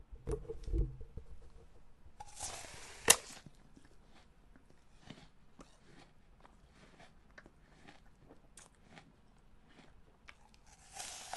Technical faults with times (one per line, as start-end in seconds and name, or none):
0.00-11.37 wrong sample rate